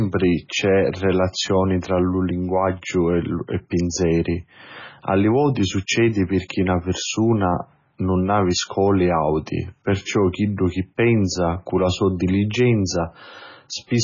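Watery, swirling speech dulled above 7 kHz throughout, with smeared onsets and chirpy sibilants, likely heavy MP3 compression at a very low bitrate, around 16 kbps.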